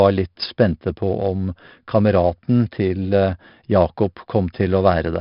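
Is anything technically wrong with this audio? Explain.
Yes. 4-bit ADPCM compression runs through the whole speech clip. Each sample is coded as a coarse 4-bit step from a prediction, so a gritty hiss rides every loud syllable and attacks sound roughened. The empty band above 5.3 kHz suggests a low sample rate and a bitrate near 44 kbps. A spectrogram would show a broadband noise floor that rises and falls with the speech and a sharp ceiling at 5.3 kHz.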